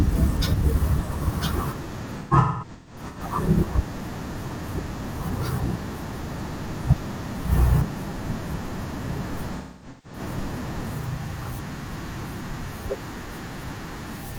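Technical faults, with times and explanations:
2.06–3.20 s: AAC frame loss with concealment. About 0.68 s of audio drops out in bursts, the longest around a fifth of a second. The decoder patches each gap from the last good spectrum, so the speech turns smeared, noisy and phasey.
9.56–10.19 s: AAC frame loss with concealment. About 0.43 s is lost within 0.6 s, including a run of roughly 0.3 s.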